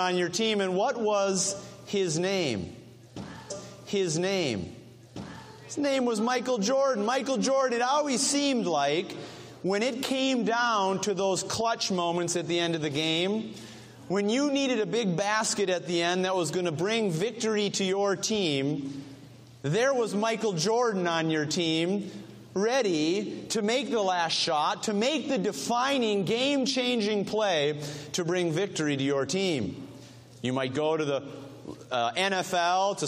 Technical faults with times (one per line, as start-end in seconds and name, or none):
3.50-5.49 stream segment repeated